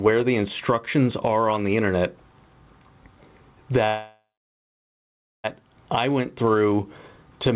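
From the start the level breathes, with a swing of roughly 15 dB, so loud and quiet passages sit squashed close together. This is gain pumping, most likely from an input gain set far too high with a fast limiter clamping it back down. On a waveform the envelope looks flattened. A spectrogram shows everything within a band that stops at 4 kHz, as the G.711 call path allows.

At 3.88 s the sound stops moving forward. A decaying buzz or hiss carries on from the last moment heard and then gives way to silence, which lasts about 1.22 s, before the audio resumes at 5.46 s exactly where it left off. This is a call audio freeze, likely caused by packets held up in transit until the jitter buffer ran dry. The whole 1.56 s stretch is filler, so nothing is lost and everything after it runs 1.56 s late. The waveform shows a fading tail and then a flat line. On the spectrogram, a smeared, fading band gives way to a blank stretch.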